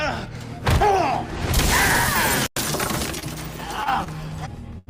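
Short stalls from a late packet occur at 3.19–3.24 s, 3.84–3.88 s, 4.04–4.08 s and 4.78–4.89 s. Each time the jitter buffer emptied, the last sound was stretched for 26, 21, 22 and 87 ms, then resumed with nothing lost, heard as brief smeared holds.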